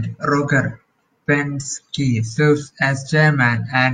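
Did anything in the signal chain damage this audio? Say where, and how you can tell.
No, nothing in the speech stood out on listening as damage from any stage of the signal chain.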